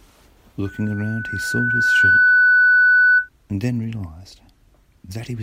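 At about 0.65 s a loudspeaker feedback squeal starts creeping in. A single tone at 1.5 kHz swells over roughly a second and a half until it's sitting around 15 dB above the speech, and it keeps ringing until about 3.29 s, when it drops away. What's happening is the mic hearing the speaker it feeds, with the loop gain at that one frequency going past unity, so the tone keeps building on itself.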